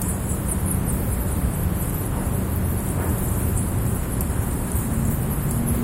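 No technical faults can be heard anywhere in this recording of sounds. Nothing in the audio stands out as a dropout, distortion or other defect.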